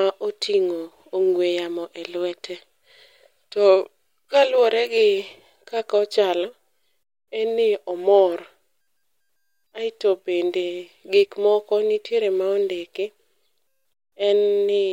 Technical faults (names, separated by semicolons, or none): none